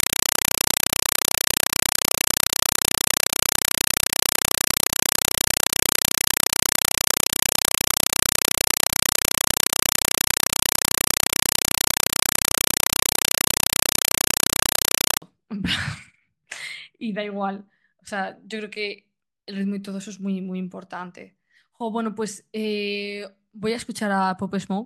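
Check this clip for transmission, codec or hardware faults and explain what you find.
One fault is present: a compressed stream played as audio, covering the first 15.2 seconds. From 0.0 s to 15.22 s a Dolby Digital (AC-3) stream, whose density fits roughly 192 kbps, is treated as ordinary samples instead of being decoded. Each frame becomes a 4 ms burst of noise followed by silence, repeating at 31.25 Hz, so the speech is replaced by extremely loud, rapid chattering static. Ordinary broadband noise or interference would be steady. Here the strict 32 ms rhythm of bursts and gaps marks an undecoded bitstream.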